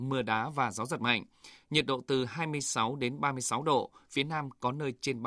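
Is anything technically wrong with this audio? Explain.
No, nothing technically wrong stood out on listening to this speech recording.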